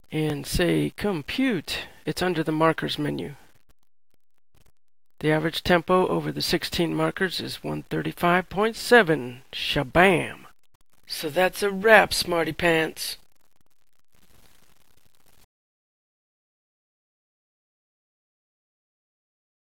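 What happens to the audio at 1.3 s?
At 1.3 s the audio carries low bit depth without dither, as it does throughout. Truncation to about 10 bits leaves gritty, signal-following distortion, roughly 40 dB below the signal, likely from undithered quantisation.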